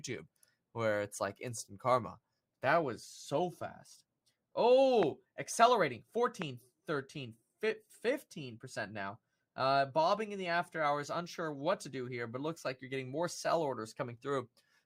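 Loud pops occur at 5.03 s and again at 6.42 s. Each is a single sharp click lasting about 20 ms and peaking roughly 15 dB above the speech, which continues underneath. The likely cause is a brief voltage spike, such as static or a switch transient, entering the signal chain.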